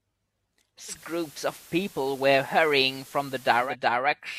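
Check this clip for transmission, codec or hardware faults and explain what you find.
One fault: digital radio blending to analogue. From 0.88 s to 3.76 s the receiver loses the digital stream and cross-fades over about 170 ms to the FM broadcast, then back. The speech gains hiss roughly 25 dB below it and shifts level by about 2 dB. On a spectrogram, a broadband noise floor fills that stretch. On the waveform, small level steps mark both edges.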